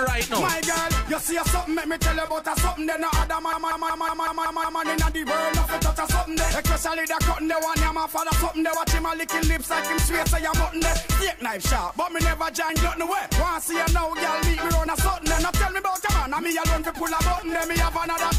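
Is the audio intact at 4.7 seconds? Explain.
No. At 4.7 seconds the sound is caught in a machine-gun stutter: one fragment about 186 ms long repeats exactly seven times, at about 5.4 times per second, from 3.53 to 4.83 s. This is a system hang loop. The computer or its driver stalled while the sound hardware kept replaying the same ring buffer, and the loop length fits an 8192-sample buffer. Essentially nothing is skipped when the audio resumes.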